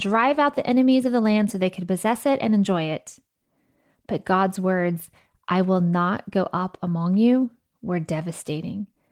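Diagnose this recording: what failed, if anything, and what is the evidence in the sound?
Nothing failed: the speech carries only the light, expected marks of its Opus voice compression at 24 kbps, and no stage of the chain shows any evidence of a fault.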